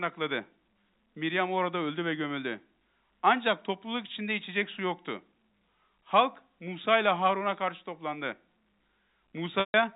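Speech clip with packet loss concealed by pitch repetition at 9.60–9.74 s: a 140 ms gap, fitting several lost packets, where the last pitch period repeats and fades, unlike a hard dropout's abrupt silence. The G.711 telephone coding underneath keeps everything under 4 kHz.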